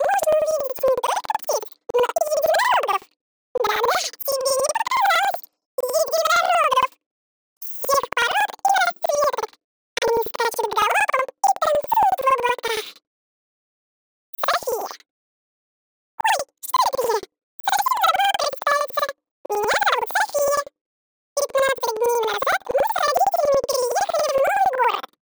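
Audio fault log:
Throughout: planar audio read as interleaved. Each 92.9 ms block, fitting 4096 samples, plays twice at double speed, an octave high with 10.8 Hz flutter.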